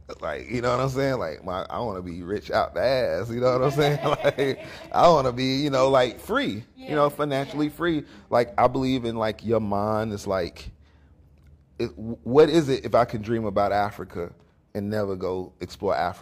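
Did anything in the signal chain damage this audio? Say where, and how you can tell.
No, nothing in the chain can be heard damaging this audio at any stage from capture through to playback.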